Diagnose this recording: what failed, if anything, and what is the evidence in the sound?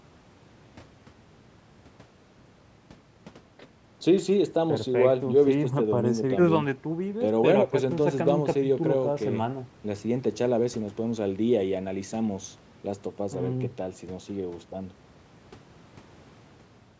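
Nothing failed in this recording, and the sound gives no evidence of any fault.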